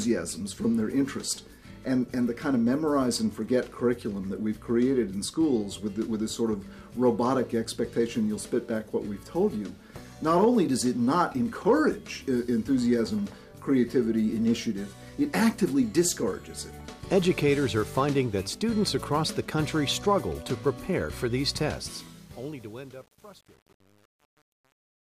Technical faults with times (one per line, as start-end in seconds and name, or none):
21.65-25.17 truncation distortion on a fade